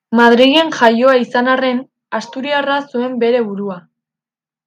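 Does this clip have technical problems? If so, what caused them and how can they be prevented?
Yes. From 0.17 to 1.14 s there is microphone overload, most likely because the input gain was set so high that the loudest peaks ran about 4 dB past the converter's ceiling. Their tops were sliced flat, affecting roughly 3 percent of the samples, so the strongest syllables carry a harsh, crackly edge up to the point where "izan arren asturiarra zuen" begins. Keeping the input gain lower, so peaks leave some headroom below full scale, would prevent this.

At 0.88 s the microphone volume steps down by about 2 dB. The call software most likely detected the clipping and pulled the device's input level down in a single jump. Voice and background both drop together and abruptly, partway through the distorted stretch and just before "izan arren asturiarra zuen", instead of fading smoothly. Disabling automatic gain adjustment and setting a sensible fixed input level beforehand would avoid this sudden step.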